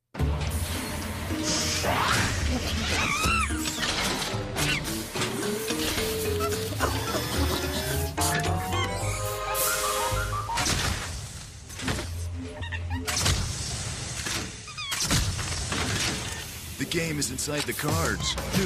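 Nothing stood out as a technical problem on listening to this recording.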